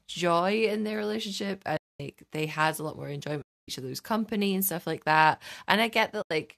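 At 1.77 to 2.00 s, 3.42 to 3.68 s and 6.22 to 6.31 s the speech falls into silent gaps of 230, 260 and 90 ms. This is AAC frame loss with muting: the decoder zeroed the missing frames, which fits frames of about 10 ms, as in the likely low-delay AAC coding. The overlapping windows fade each edge over roughly one frame. Unlike a hard dropout, these holes open and close softly.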